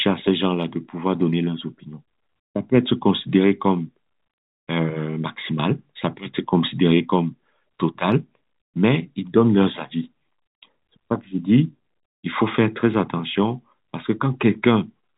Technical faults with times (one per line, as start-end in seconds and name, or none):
none